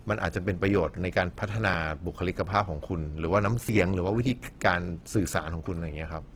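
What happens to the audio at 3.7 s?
At 3.69 s the recording likely lost a piece of audio between processing chunks: about 50 ms vanished while one chunk closed and the next opened, and the two sides were butted together with no silence, so the sound jumps abruptly forward in a single skip.

Running through that moment, as through the whole clip, is plainly audible Opus compression, likely in its music (CELT) mode at a low rate near 16 kbps. Starved bands are filled with noise or copied material, making the speech sound rough and grainy, though the bandwidth stays full, reaching about 20 kHz.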